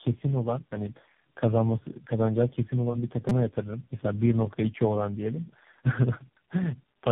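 Rough, muffled and warbly speech runs throughout, with nothing above 3.7 kHz. This is tandem speech coding: the sound was decoded and re-encoded by about four narrowband speech codecs in turn, each compounding the previous one's damage, consistent with a GSM, AMR and G.726 chain. From 3.29 to 3.31 s a brief buzz cuts in. It is a repeated buffer: new audio arrived late, so one tiny slice, fitting a buffer of about 5 ms, was replayed four extra times with hard joins.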